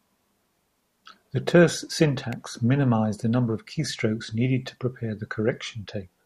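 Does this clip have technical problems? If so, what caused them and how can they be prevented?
Yes. An electrical switching spike occurs at 2.33 s in this speech, a sharp snap lasting only a few milliseconds and peaking at about -20 dBFS, sitting on top of the speech rather than replacing it. Its abrupt, broadband character points to an arc, likely from a nearby switch, relay or motor, that the microphone cable or input picked up electrically. Keeping audio cables away from power switching gear, using balanced shielded lines and proper grounding prevents such spikes.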